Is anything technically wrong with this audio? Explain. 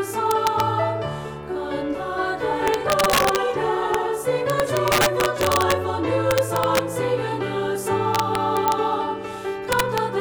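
Yes. Integer overflow is present: a gain or sum stage lets peaks exceed the largest integer, and instead of being held at the limit they wrap to the opposite sign. Each peak over the limit jumps across the full range, producing violent cracks far sharper than clipping.

The cracks come at 0.31 to 0.60 s, 2.68 to 3.36 s, 3.94 s, 4.50 to 5.72 s, 6.31 to 6.79 s, 8.15 to 8.72 s and 9.72 to 9.98 s. The signal is driven past the limit by about 1 to 6 dB. The overdrive is heaviest at 2.68 s, at about 6 dB, and at 4.50 s, at about 4 dB, so those stretches crack hardest.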